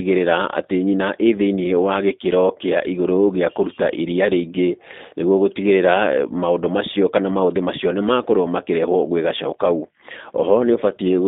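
From start to end the speech sounds narrow, slightly rough and synthetic, with nothing above 3.7 kHz or below 200 Hz. This is G.729 codec damage, consistent with an 8 kbit/s telephone-band line.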